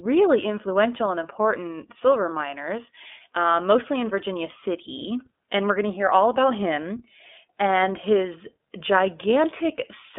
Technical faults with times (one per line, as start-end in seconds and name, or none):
0.00-10.18 iLBC codec